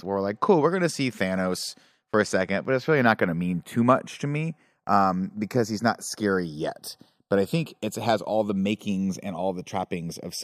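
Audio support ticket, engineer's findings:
Channels drifting apart, whole clip. Slow flanging on the speech when summed to mono. Comb notches sweep steadily through the spectrum. Probable cause: two capture devices on separate clocks, around 40 ppm apart. Inter-channel delay creeps to under half a millisecond.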